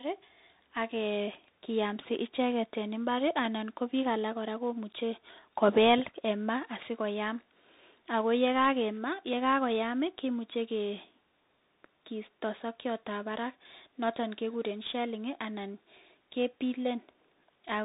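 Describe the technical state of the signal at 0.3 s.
At 0.3 s the speech carries tandem speech coding, present throughout the clip: it passed through CVSD, then G.711 A-law, then CVSD again, each coder re-degrading the last. It sounds rough and noisy; a spectrogram shows nothing above 3.8 kHz.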